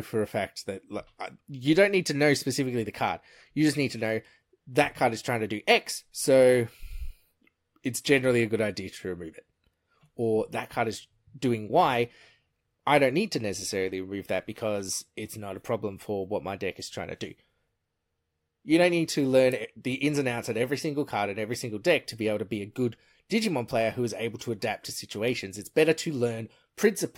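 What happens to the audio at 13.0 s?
Nothing goes wrong at 13.0 s; the speech plays through that moment intact, with no dropout, click, distortion or other fault.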